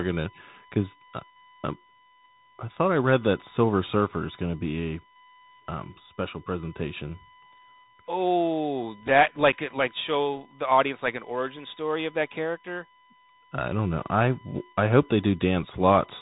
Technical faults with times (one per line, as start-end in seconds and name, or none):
0.00-16.21 USB whine
0.00-16.21 Bluetooth CVSD headset codec